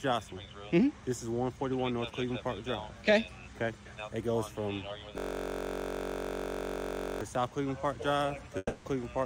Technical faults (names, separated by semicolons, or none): system hang loop; long network dropout